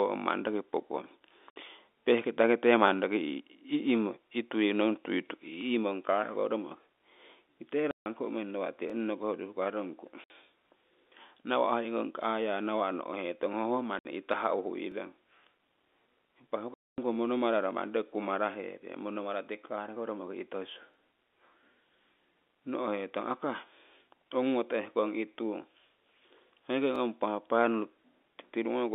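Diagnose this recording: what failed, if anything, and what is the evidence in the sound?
The network stage dropped packets, and the receiver played silence in their place (packet loss filled with silence). Hard-edged holes fall at 1.51–1.56 s, between "roki pookong" and "peh'kita nokite" (60 ms), and at 7.91–8.06 s (150 ms). More follow at 10.24–10.30 s, just after "urii hukarongku" (60 ms), 13.99–14.05 s (60 ms) and 16.74–16.98 s (240 ms). Every gap is a multiple of 30 ms, which fits 30 ms packets.

A buffering or chunked-processing stage shows overlapping chunks. At 8.90 s, just after "nawa' tii", and at 14.92 s and 26.96 s, about 20 ms of audio plays twice, heard as a brief stutter at the join. The audio is handled in 6 s chunks, and each chunk begins 20 ms before the previous one ends, so the overlap is replayed at each boundary. The G.711 telephone coding band, roughly 250 Hz to 3.6 kHz, stays intact around these joins.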